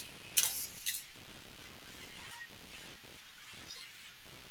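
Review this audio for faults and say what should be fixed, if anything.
Computer activity noise runs throughout the speech, a buzzing, chirping texture pulsing at around 70 per second and sitting roughly 15 dB below the voice. Processor and graphics load changes are shifting the shared ground, so the noise follows machine activity, not the speech. Prevent it by using an isolated USB audio interface or ground-loop isolator, away from the computer's noisy ground.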